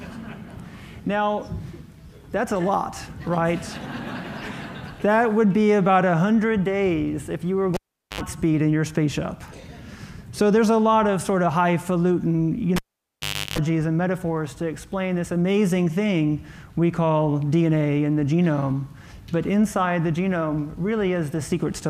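At 7.74 s and 12.76 s a cable is pulled and plugged in: a pop, near silence for 0.42 s then 0.77 s, and 50 Hz mains buzz (74 ms, then 0.34 s) while only the tip touches. The waveform shows spikes bracketing a flat gap. The spectrogram shows vertical click lines and a 50 Hz harmonic comb.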